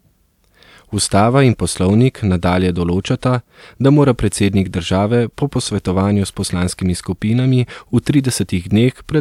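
No technical faults can be heard anywhere in the speech.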